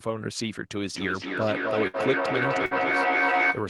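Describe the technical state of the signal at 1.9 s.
At 1.9 s two faults overlap. A burst of packet loss runs from 1.87 to 1.97 s: the receiver stretched the last received sound for about 62 ms, fading it into a held buzz or hiss, then resumed with about 60 ms of audio missing.

Underneath, a feedback echo between two devices runs from 0.91 s to the end. A second device's playback re-enters a microphone, so sound returns roughly every 300 ms, thinner and ringing. The repeats build to about 3 dB above the direct speech instead of decaying.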